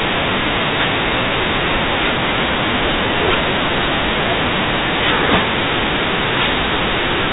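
Nothing here goes wrong: the speech simply comes through the telephone-style G.711 line, topping out around 4 kHz, with no glitches or dropouts anywhere along the way.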